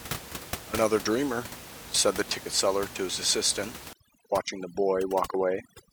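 From 3.93 s to the end, overdone noise removal leaves the room noise, about 14 dB below the speech, as near-silence with twinkling specks. Quieter speech frequency bands are cut away. On a spectrogram the background becomes scattered isolated dots, with holes punched through the voice.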